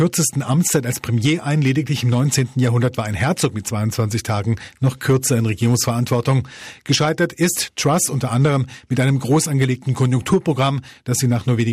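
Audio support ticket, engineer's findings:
Hard clipping throughout the speech, on peaks from start to end. Crackle on louder syllables, not continuous fuzz. Probable cause: gain stage ahead of the ADC or a fixed-point conversion driven about 4 dB past full scale, so around one percent of samples hit the ceiling and are cut flat. Flat tops add high-frequency harmonics. Fix: reduce input gain by at least 4 dB and re-record.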